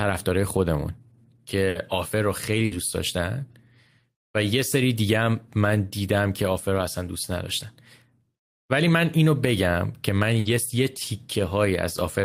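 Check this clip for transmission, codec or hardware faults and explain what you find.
Three bursts of packet loss occur in the speech, at 1.69 to 1.78 s, 2.65 to 2.74 s and 10.39 to 10.48 s. Each time, the receiver filled about 60 ms by extending the last sound and fading it, producing a brief held buzz or fading hiss, and about 60 ms of speech never arrives. On a spectrogram, the harmonics flatten into frozen horizontal bands that dim, then the speech jumps ahead. On the waveform, a repeating, decaying pattern ends in an abrupt discontinuity.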